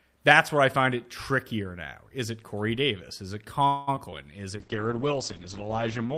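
A speech recording in which, from 3.67 to 3.89 s, the sound stalls for about 200 ms: the last sound is stretched into a fading buzz or hiss rather than dropping to silence, and then the speech resumes exactly where it left off, so nothing is lost but a pause has been inserted. This is likely a call audio freeze, where packets were delayed in transit, the jitter buffer ran dry, and the receiver kept extending the final sound until the late audio arrived, adding roughly 200 ms of delay. Right after, two tiny glitches appear as brief smears or wobbles, at 3.95 to 3.98 s and at 4.10 to 4.14 s, each a few hundredths of a second long. These are short concealed packet loss: about 20 ms of audio failed to reach the decoder in time on each occasion, so the receiver patched the hole by continuing the preceding sound and then crossfading back into the real signal, which can swallow a brief consonant. 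From 4.58 s to the end, the speech becomes muffled and rougher, losing its crisp top end. This is a call bitrate drop: the encoder was throttled from 48 kbps to 9 kbps, which forces much coarser coding and narrows the audio bandwidth from 20 kHz down to 8 kHz, and the rate stays at that floor for the final 1.6 s.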